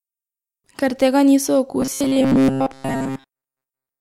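A speech clip with robotic sound from repeated short buffers from 1.80 s to 4.00 s: a rigid metallic buzz at 134 Hz, likely from a segment of about 7.5 ms being replayed most of that time. A spectrogram shows flat, evenly spaced harmonic lines, and the waveform shows identical repeating cycles.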